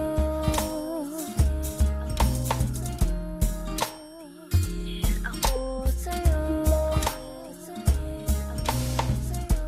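No technical faults can be heard in the clip, so there is nothing to describe in time order.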